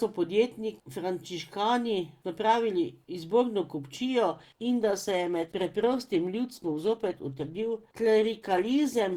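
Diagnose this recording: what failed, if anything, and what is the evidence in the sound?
The failure is in the network stage, an adaptive stream at a lower bitrate. Right after "frančiškani napravili izborno kupčijo", at 4.34 s, the speech suddenly turns coarser and more artefact-laden, with no gap, until the end. That fits the player switching from roughly 64 to 16 kbit/s Opus when the connection slowed.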